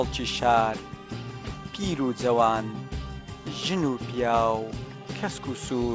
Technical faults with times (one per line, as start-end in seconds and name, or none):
none